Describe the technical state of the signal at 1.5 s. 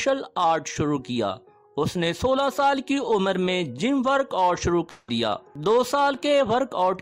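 At 1.5 s the signal is intact, with no audible dropout, distortion or other fault at that point.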